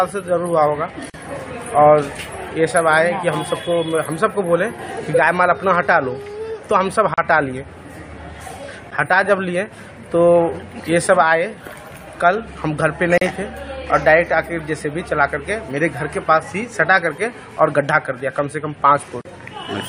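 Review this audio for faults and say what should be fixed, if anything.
Short holes of 37 to 42 ms break the continuous sound at 1.10, 7.14, 13.18 and 19.21 s. They repeat every 6 s, have smeared edges, and the sound resumes exactly where it stopped. This is a gap at a join of encoded pieces. Separately encoded 6 s segments were joined with each encoder run's start delay and last-frame padding still in place. Trim the encoder delay and padding at every join, or encode the material as one continuous stream.

A tick or dip at 8.91 s is a block of digital silence lasting 10.67 ms. Its length fits a 512-sample buffer that was not filled in time, so the output jumps to zeros and back with no fade. Give the audio processing enough buffer headroom or priority so that every block is delivered before its deadline.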